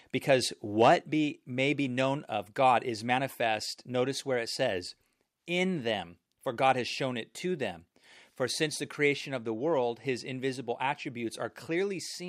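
Right at the start, from 0.81 to 0.88 s, there's a short burst of microphone overload. The loudest bit of speech there pushes about 3 dB past what the converter can take, so the tops of the waveform get sheared flat on a small fraction of samples. You hear it as a brief harsh, crackly edge on that peak. The likely cause is the mic input gain being set too high for how loud the talker got.

Then there's the microphone volume stepping down, twice. The first step is at 1.02 s, just after that distorted peak, and the level drops by about 2 dB. The second is at 9.15 s, a smaller one of about 1 dB. Each time, the speech and the background noise fall together, abruptly, with no fade. That pattern points to the call software likely noticing the hot signal and turning down the device input in a single notch.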